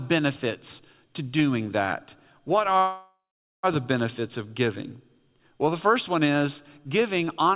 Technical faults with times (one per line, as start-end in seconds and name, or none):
2.78-3.65 call audio freeze